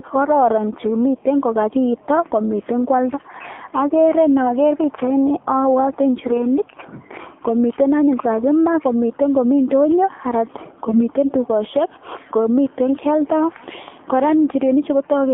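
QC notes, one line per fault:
throughout: AMR narrowband mobile codec, 7.4 kbps, audio limited to about 200 Hz to 3.4 kHz; the sparse pulse-driven vocal-tract model makes the speech plainly buzzy and synthetic.
10.88–11.05 s: AMR bit errors, a hoarse, gargly scratch lasting about 0.17 s, consistent with several 20 ms frames carrying flipped low-priority bits that misplace the excitation pulses.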